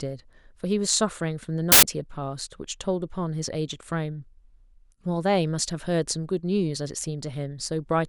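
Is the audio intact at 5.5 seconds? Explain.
Yes, the speech at 5.5 seconds plays through cleanly, with no dropout, click, distortion or other break at that point.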